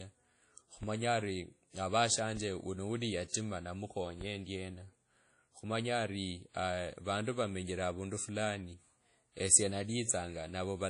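Throughout the speech there is plainly audible codec damage. Nothing is left above about 10.1 kHz. The sound rings and washes, with a hiss that rises and falls with the speech. This points to a low bitrate, and the likely cause is WMA compression from an early WMA encoder. Its long transform blocks spread quantisation noise over tens of milliseconds, and weak frequency lines are dropped to zero.

At 0.83 s the first DC step occurs. The zero line of the waveform jumps suddenly, as when a converter recalibrates or an offset input is switched in. It is heard as a low thump or click. The speech itself carries on unchanged. The offset then dies away slowly, as a very low cut near 5 Hz would drain it.

A second DC step falls at 2.37 s, just before "wuno wuli". It brings the same thump and the same slow decay.

Right after "wuno wuli", from 3.28 to 3.34 s, there is pre-echo lasting 57 ms. A sharp attack arrives late in a transform block. 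The codec spreads its noise evenly across that block, so noise sized for the loud attack also fills the quiet gap before it. A short hiss comes first, and the attack sounds softened and smeared.

The third DC step comes at 4.21 s. It is another low thump, and the offset again decays away.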